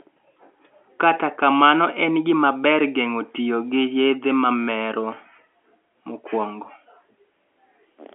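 No technical faults are audible.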